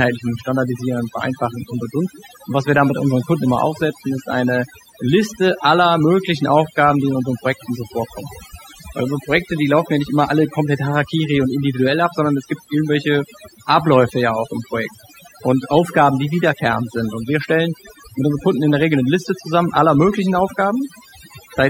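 Overdone noise removal runs through the whole speech recording: the noise reduction is pushed so hard that any frequency band close to its noise estimate gets pulled down or muted. The background collapses into near-silence dotted with twinkling specks, while softer voice components vanish.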